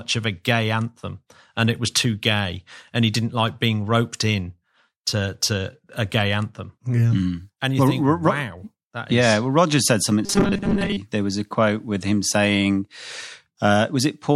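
From 10.26 to 10.97 s the speech goes robotic, a stiff metallic buzz locked at 200 Hz that only loosely tracks the words. That's likely repeated short buffers: audio arriving late, with roughly a 5 ms chunk looped to fill most of that stretch.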